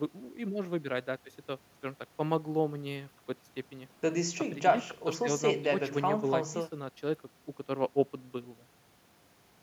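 No technical faults are audible.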